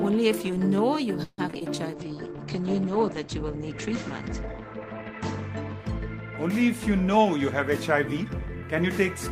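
From 1.23 to 1.63 s, repeated packet loss leaves five gaps, the longest 148 ms. Concealment patches about half the span, so the sound turns choppy and robotic.

At 1.91 s, a jitter buffer slow-down begins. Repeated pitch periods stretch the audio to 83% speed until 2.16 s, adding 51 ms of drawn-out sound.

From 1.94 to 6.32 s, a call bitrate drop takes hold. The coarse, rough sound and the cut-off falling from 20 kHz to 8 kHz suggest a fall from about 32 to 12 kbps. The worst stretch lasts about 3 s.

From 7.14 to 8.85 s, a jitter buffer speed-up trims short pieces, about 150 ms in all. The audio runs at 108% speed and sounds hurried.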